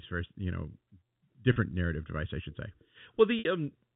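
At 1.53 to 1.56 s, just before "narrative device I should", there is packet loss with pitch repetition. About 30 ms of audio is missing, which fits one lost packet. The receiver repeats the last pitch period to fill the hole, so the speech briefly holds with a slight buzz. At 3.39 to 3.45 s a 60 ms gap, which fits two lost packets, is bridged the same way, and the repeated cycle fades out before the speech resumes. Both gaps sit in G.711 telephone audio, which passes nothing above 4 kHz.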